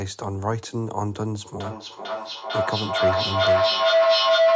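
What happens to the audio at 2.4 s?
A feedback howl is running: a microphone-to-loudspeaker loop gains level on every pass, so from 1.6 s to the end a tone near 700 Hz swells, pulsing about every half second, peaking about 10 dB above the speech.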